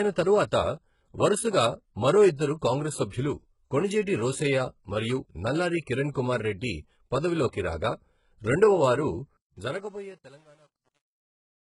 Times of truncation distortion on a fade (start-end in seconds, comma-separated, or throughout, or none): 9.37-11.75